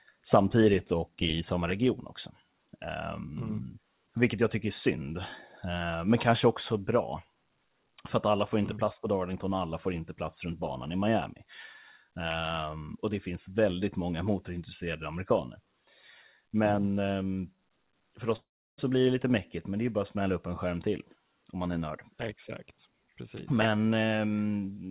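Speech carried over a call path whose G.711 A-law coding stops everything above 4 kHz has one long network dropout, likely a stretch where no packets reached the receiver, from 18.36 to 18.80 s. With nothing arriving, the receiver stretches the last sound into a fading buzz, and about 330 ms of that gap is left as plain silence. About 420 ms of the original audio is lost, and the speech resumes without that section.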